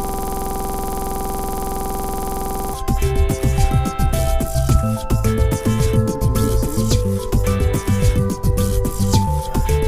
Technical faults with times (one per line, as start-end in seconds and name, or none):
0.00-2.74 system hang loop